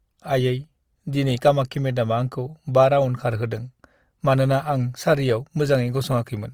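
The speech was likely squeezed through Opus compression in its music mode at a rate that sounds like about 24 kbps, so starved bands get filled with folded or noise content throughout, leaving the full-bandwidth sound plainly rough, grainy and noisy in its tonal parts.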